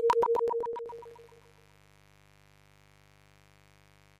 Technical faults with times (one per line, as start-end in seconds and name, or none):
0.85-4.19 mains buzz
1.08-1.43 DAB burbling